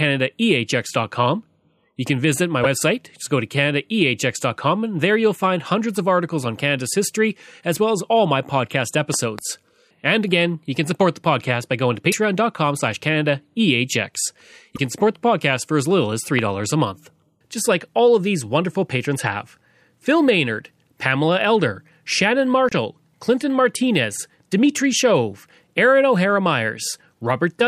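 Speech, interrupted at four points by what is likely a broken MP3 bit reservoir: at 2.63–2.66 s, 12.11–12.14 s, 14.75–14.79 s and 22.69–22.73 s the audio skips forward and the next 30 to 44 ms come out as a brief chirp or smear of noise. That span is between one and two 26 ms frames, which fits a decoder reading borrowed bytes from a frame that is no longer there. On a spectrogram each event is a thin vertical band of broadband or oddly patterned energy where the harmonic structure breaks. In the waveform the envelope jumps abruptly instead of following a smooth contour. Loud pops, likely from an electrical transient such as a plug, switch or static discharge, sit on top of the ongoing speech. Between 9.14 and 9.41 s there is a pair of pops peaking roughly 10 dB above the signal, and at 16.39 s a single louder one about 15 dB above it. These appear as tall narrow spikes in the waveform and as full-height vertical lines on a spectrogram.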